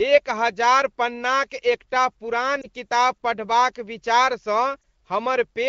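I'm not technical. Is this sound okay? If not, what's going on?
No. At 2.61 to 2.67 seconds and again at 4.81 to 4.83 seconds the speech has a brief dip or wobble. These are lost AMR speech frames: the phone network garbled a tiny slice of the call, and the phone covered each gap by repeating the last good sound at lower volume. Unlike a plain dropout, which leaves a hole of silence or a click, this sounds like a short smeared warble.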